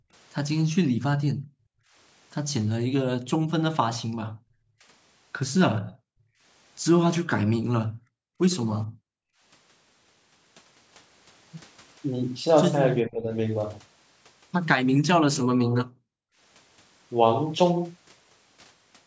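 Background gated by the echo canceller, 0.0 to 1.94 s and 3.38 to 4.85 s: while the far end's loudspeaker played, the canceller clamped the microphone, pulling the room sound down by up to about 40 dB. It drops away for roughly a second, then for under a second, and returns once the canceller releases.

Echo leak, 5.76 to 5.81 s: a brief, faint copy of speech surfaces about 25 dB below the talker, delayed by 430 ms. This is likely the far-end canceller failing to strip all of its loudspeaker sound from its microphone and sending the remainder back.

Speech suppressed in double talk, 5.85 to 5.96 s: with both sides talking, the canceller likely mistook the talker for echo and cut the voice by roughly 40 dB for about a tenth of a second.

Background gated again at 6.24 to 6.41 s, a shallower dip of about 22 dB, and at 7.35 to 9.41 s, where about 40 dB of suppression empties the room sound for roughly 1.5 s.

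Speech suppressed in double talk, 13.05 to 13.33 s: a milder dip of roughly 15 dB lowers the voice for about 0.3 s, likely while the other side speaks.

Background gated at 15.47 to 16.38 s: the room sound falls by about 40 dB for under a second before recovering.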